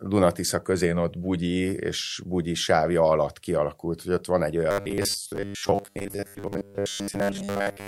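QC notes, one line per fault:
4.71–7.87 s, robotic sound from repeated short buffers: after "hogy ott van egy" the speech becomes a rigid metallic buzz pinned at 100 Hz, likely because audio arrived too seldom and a 10 ms slice was looped in its place, skipping most of the real signal.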